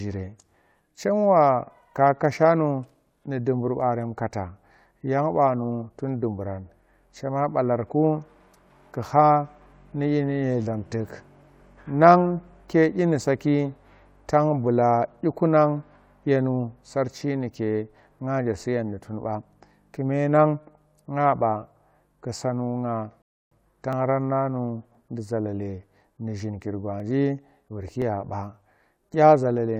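A rebuffering stall runs from 23.22 to 23.51 s. The player used up its downloaded audio and paused playback until more data arrived, so the speech drops into about 0.3 s of silence and then carries on exactly where it stopped. No speech is skipped. The gap simply adds time.

Periodic USB or driver dropouts begin at 23.93 s and continue until 29.04 s, spaced 1.02 s apart for about seven events. Something in the background holds up the USB bus or audio driver at that fixed interval, and each time a sliver of audio, well under a millisecond, is skipped rather than filled. The result is an evenly timed tick in the speech, heard only where there is signal.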